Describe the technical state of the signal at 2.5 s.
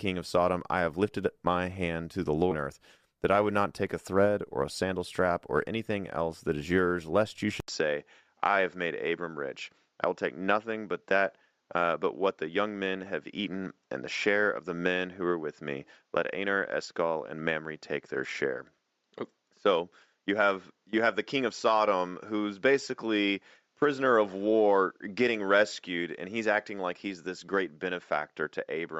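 At 2.51 to 2.56 s the speech jumps abruptly with a blip between "my hand to the" and "earth that I would", likely a stream segment skipped after failing to load.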